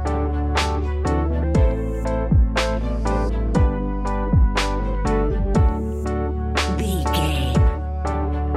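No technical faults can be heard anywhere in the signal.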